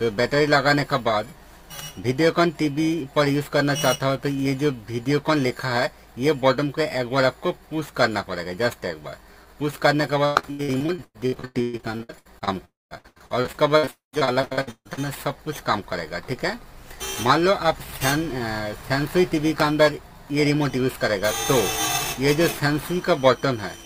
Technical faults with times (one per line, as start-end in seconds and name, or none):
0.00-23.85 periodic clock jitter
10.25-12.49 repeated packet loss (robotic sound)
12.65-12.93 long network dropout
12.95-14.99 repeated packet loss (robotic sound)
13.91-14.15 long network dropout